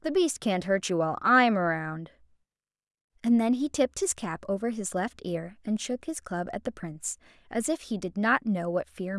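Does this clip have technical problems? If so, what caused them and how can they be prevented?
No, there are no technical problems to report here.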